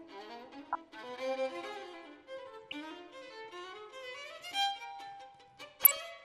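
Throughout, the sound is dull and plainly granular, with a gurgling edge as upper bands flicker in and out and what remains is coarsely quantised. That points to MP2 compression, likely at around 80 kbps, too few bits to keep all 32 sub-bands active.

At 0.72 to 0.75 s, 2.66 to 2.75 s and 5.81 to 5.97 s, bursts of short noise blips cut across the audio. This is DAB burbling: bit errors, a fraction of a percent, slipped past error correction and corrupted samples, putting short blips of noise into single sub-bands.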